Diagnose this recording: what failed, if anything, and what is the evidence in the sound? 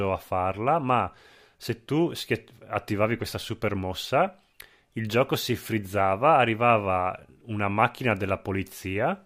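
No fault is audible here.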